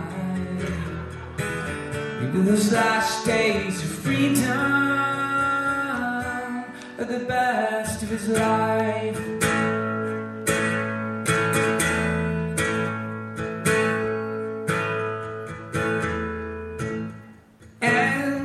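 At 11.27 s there is a block of digital silence lasting about 5.8 ms. The signal drops straight to zero and returns with no fade on either side, so each edge produces a discontinuity. A gap this short is not heard as a hole. It comes across as a tick or dip. The length fits a 256-sample buffer that was not filled before the output needed it, leaving zeros in its place.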